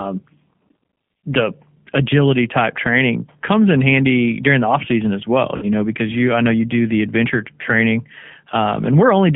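Speech coded throughout with the G.729 codec at 8 kbit/s. The band runs only from about 150 Hz to 3.4 kHz, and the analysis-by-synthesis coding leaves a plainly audible rough, slightly synthetic texture in place of natural voice detail. Between 5.57 and 5.66 s, after "off season as well" and before "know because you I", VoIP packet loss concealed by the speech codec replaces about 50 ms of audio, which fits five lost 10 ms frames. The decoder extrapolates the previous pitch and filter into a fading buzzy or noisy smear, and the voice sounds weak or distorted as it recovers.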